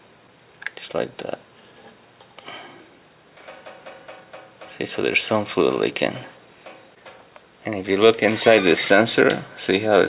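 Nothing in the audio stood out as a technical problem on listening.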